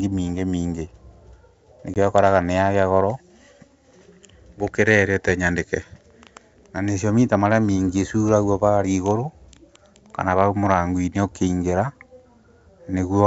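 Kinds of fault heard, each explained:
Packet loss on an ADPCM call: at 1.94 s the speech drops into a hard-edged silent hole about 20 ms long, roughly one packet. During the gap the decoder's adaptive predictor and step size drift out of step with the sender's. When the speech returns near 1.97 s it comes back slightly distorted, before settling. That disturbed re-entry is what distinguishes it from a plain dropout, which resumes cleanly.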